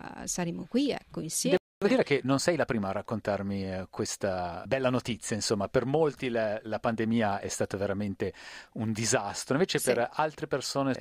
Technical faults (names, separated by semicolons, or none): playback stall; time-compressed catch-up